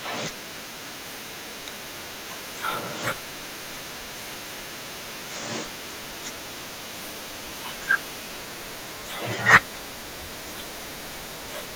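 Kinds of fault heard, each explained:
Periodic USB or driver dropouts: a recurring stall of the USB bus or driver skips about a millisecond of speech every 0.5 s, heard as regular ticks from 0.43 s to 11.42 s.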